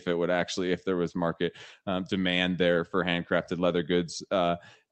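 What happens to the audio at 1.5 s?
Nothing goes wrong at 1.5 s: the speech passes through intact, carried by the call path, whose band tops out around 8 kHz.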